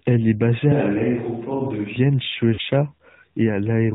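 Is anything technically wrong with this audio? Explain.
Yes. The whole clip is speech carried through the AMR narrowband mobile codec, and the damage is plainly audible. Sampling is 8 kHz and nothing above 4 kHz survives, at a bitrate near 10.2 kbps. A few pulses drive a vocal-tract model, so the voice sounds buzzy and synthetic. On a spectrogram everything stops hard at 4 kHz.

From 0.72 to 1.96 s, just after "est basée", the sound changes to a distant microphone, likely because the close microphone dropped out. The level falls by about 5 dB and the voice turns roomy and hollow, with thinner bass. Room noise sits about 35 dB below the voice. The waveform steps abruptly at both ends.

From 2.54 to 2.61 s there are lost AMR speech frames, about 40 ms of them. Radio errors corrupted the frames, so the decoder repeated its last pitch and vocal-tract settings with falling gain. The sound is briefly smeared and dips, then returns rough. 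The spectrogram shows a short smeared, fading patch.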